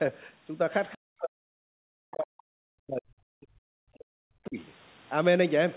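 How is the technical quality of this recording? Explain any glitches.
The recording has two stretches where the speech is heavily attenuated. The audio is band-limited to 4 kHz, which fits narrowband G.711 call coding.

Speech suppressed in double talk, 0.93–2.37 s and 2.67–4.58 s: the speech drops by up to about 40 dB or breaks up, likely because an echo canceller confused it with loudspeaker echo. On a waveform, the envelope collapses into thin stretches. On a spectrogram, the energy fades or gaps across the band.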